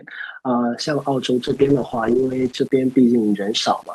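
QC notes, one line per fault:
0.82–3.94 s: low bit depth without dither. From here to the end the speech carries a grainy, gritty distortion that rises and falls with the voice instead of sitting as a steady hiss, and quiet tails break up or sputter. The error sits roughly 30 dB below the signal. That signal-tracking grain, rather than a constant noise floor, is what separates it from added noise. The likely cause is rounding to around 7 bits with no dither.
1.47–2.71 s: call bitrate drop. Over this stretch the speech turns rough, watery and muffled as the top end disappears, then clears once the rate recovers. The rate sits at its lowest for about 1.2 s. The sound points to the encoder falling from around 64 kbps to about 10 kbps and cutting high frequencies to save bits. Unlike the bit-depth grain, this is a codec smearing and band-limiting of the sound, and it ends when the rate comes back.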